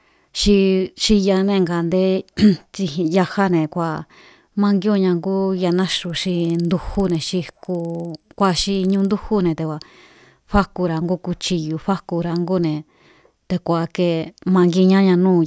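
From 5.75 to 9.1 s the speech carries a buzz of ticks repeating 20 times a second, the signature of a resampler restarted on every block. Each 50 ms chunk was converted separately, consistent with a 44.1 kHz to 16 kHz conversion, so every chunk edge lacks true neighbouring samples and picks up a small error. The waveform shows tiny discontinuities every 50 ms, and a spectrogram shows thin vertical lines at that spacing, present only where speech is.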